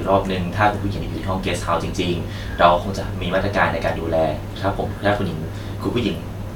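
No dropouts, distortion, glitches or level faults turn up anywhere in the recording.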